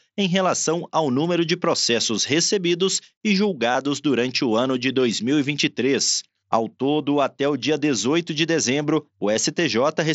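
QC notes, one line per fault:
3.72 to 3.75 s and 9.34 s, concealed Bluetooth headset packet loss. Audio from the headset dropped out and was patched with copies of the preceding waveform. The 30 ms gap, which fits four lost packets, gives a brief buzzy tone and a small warble at resumption. The 9.34 s loss fits a single packet and is nearly hidden.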